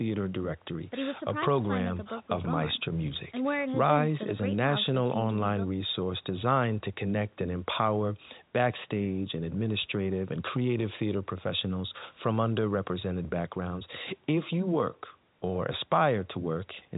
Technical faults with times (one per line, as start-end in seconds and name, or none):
none